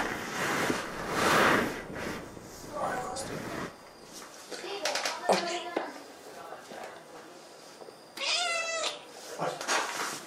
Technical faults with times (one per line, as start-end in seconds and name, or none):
1.16-10.16 periodic USB or driver dropouts